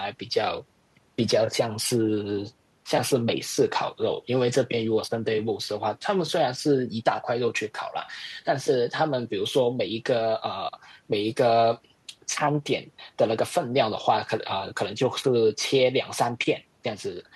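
No faults turn up anywhere in this speech recording; every moment of it checks out against the signal-path criteria.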